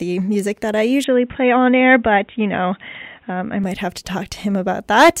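At 1.04 to 3.64 s, after "music that I", the speech is cut above 3.8 kHz and gains its own faint hiss: likely an input switched to a poorer device.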